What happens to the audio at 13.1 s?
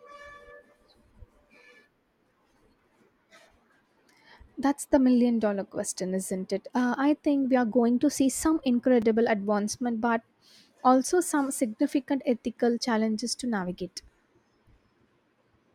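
Nothing goes wrong at 13.1 s; the speech carries on intact through that moment.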